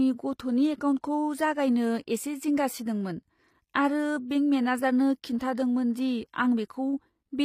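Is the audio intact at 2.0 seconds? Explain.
No. At 2.0 s, as throughout, the speech carries plainly audible damage, likely from HE-AAC compression at a low rate near 24 kbps. The treble is rebuilt from copied lower bands, so s sounds turn gritty and lispy. A spectrogram shows a smeared, repeated-looking upper band stopping sharply at 15.5 kHz.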